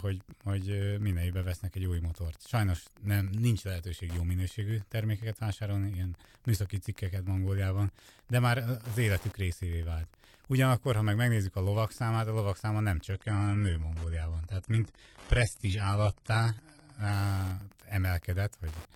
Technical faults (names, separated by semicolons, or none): Wi-Fi interference; adaptive stream at a lower bitrate